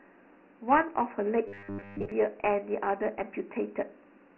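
Speech runs through Dialogic VOX ADPCM for its full length: the 4-bit coding leaves a gritty hiss riding on every syllable. The 24 kbps rate fits 6,000 samples per second. A spectrogram would show nothing above 3 kHz, a thin band down toward 200 Hz, and a grainy noise floor filling the gaps between words. From 1.48 to 2.12 s the sound collapses into a rigid metallic buzz at 100 Hz, likely from a starved buffer repeating its last 10 ms for most of that stretch. It would appear as evenly spaced 100 Hz harmonic stripes on the spectrogram and as identical repeating 10 ms blocks in the waveform.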